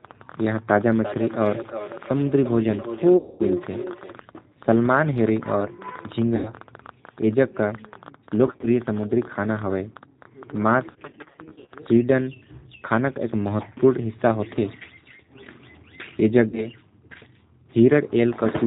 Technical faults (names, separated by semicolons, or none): G.729 codec; feedback echo between two devices; VoIP packet loss concealed by the speech codec